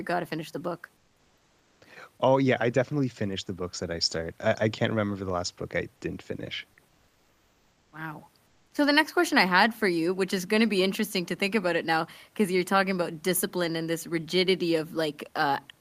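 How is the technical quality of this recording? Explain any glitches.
The recording is clean apart from three pauses where comfort noise replaces the background, at 0.96 to 1.81 s, 6.88 to 7.92 s and 8.46 to 8.71 s. The sender likely stopped transmitting during silence (discontinuous transmission, which fits Opus DTX), so the receiver filled those gaps with synthetic noise. The room's own background noise, sitting about 40 dB under the speech, gives way to a flat, detail-free wash about 2 dB quieter.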